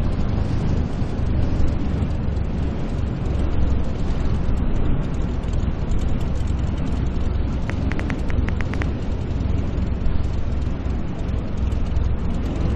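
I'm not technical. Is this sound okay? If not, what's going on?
No. A train of clicks runs from 7.70 to 8.83 s: about ten sharp ticks, roughly seven per second at an uneven pace, louder than the surrounding sound. Something is likely injecting repeated pulses, such as interference from nearby equipment or a faulty connection or power supply.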